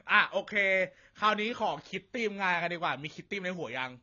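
Speech runs the whole clip with nothing above 7 kHz, and sustained sounds and sibilants carry a plainly audible dull, smeared, warbling fizz. The likely cause is AAC compression, fitting AAC-LC at a low 24 kbps. A simple low-pass filter would remove the top end without that swirling texture.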